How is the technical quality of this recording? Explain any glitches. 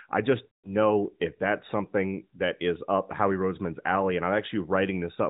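One clear glitch mars this narrowband mobile speech recording, with nothing above 4 kHz and only light codec colouring.

Lost AMR speech frames, 0.46 to 0.76 s, between "I just" and "know if that's something": radio errors corrupted a run of frames, so the AMR decoder filled the gap by repeating the last good pitch and vocal tract settings at falling gain. The missing stretch fits about nine 20 ms frames, roughly 180 ms. It sounds like a smeared, drawn-out tone fading toward silence, then a weak, rough return.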